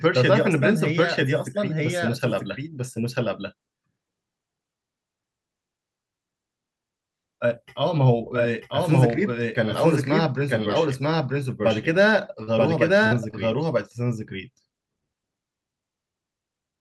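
Speech runs through the whole recording with a doubled audio track: an equally loud, full-band copy trails the original by roughly a second, most likely a second capture over a slower path. On a spectrogram every syllable pattern repeats about one second later, undecayed and uncoloured. There is also short concealed packet loss at 12.43–12.49 s, 13.07–13.13 s and 13.31–13.35 s, where about 40, 40 and 20 ms of audio never arrived in time. The decoder extended the preceding sound, heard as brief smears or wobbles, and the waveform shows smoothed, repetitive stretches where detail should be. The spectrum stops near 12 kHz, as a call codec such as Opus would leave it.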